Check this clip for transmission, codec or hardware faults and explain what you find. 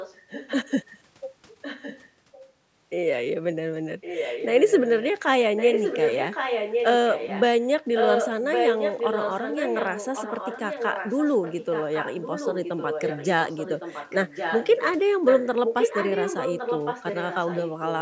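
One fault stands out: an echo leak, heard at 0.0–0.71 s, 1.62–2.43 s, 4.01–5.08 s, 5.57–14.92 s and 15.25–17.88 s. A delayed copy of the speech trails it by about 1.1 s. It likely comes from a far end playing the call over a loudspeaker, where the echo canceller failed to remove what its microphone picked up and sent it back. The copy starts quiet, roughly 15 dB below the speech, and grows to roughly 5 dB below from 5.57 s on.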